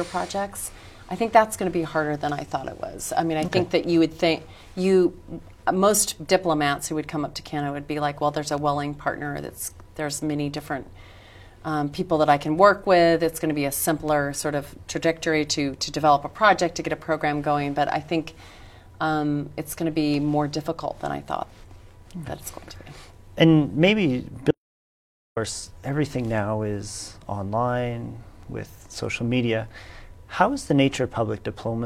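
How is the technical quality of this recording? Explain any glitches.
There is one clear glitch: an audio dropout to silence from 24.51 to 25.37 s. The sound cuts off abruptly and returns just as suddenly, about 0.86 s later. The gap is silent. No room tone or background hiss remains inside it. That points to the input itself being lost, likely through a brief disconnection, link failure or accidental mute, while recording carried on writing silence. Whatever occurred during that gap is gone.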